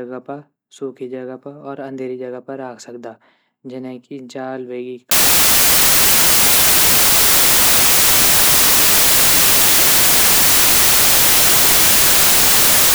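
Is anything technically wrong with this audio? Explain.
Yes. From 5.11 s, right after "जने की जाल वेगी", to the end of the clip, the speech turns into loud, harsh broadband noise because the samples are built from the wrong bytes. The reader assembles each sample with the bytes misaligned or in swapped order, so the rapidly fluctuating low bits become the dominant part of each value.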